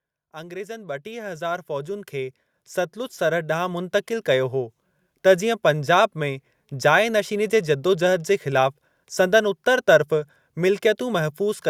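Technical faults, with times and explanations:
0.18–2.42 s and 2.93–4.81 s, automatic gain rising: the level climbs smoothly by about 10 dB over the first span and about 5 dB over the second, as the automatic gain control judges the input too quiet and steadily turns it up. Speech and the background noise floor swell together over roughly two seconds each time, which distinguishes this from a talker leaning closer (voice alone grows) or compressor pumping (fast, syllable-paced swings).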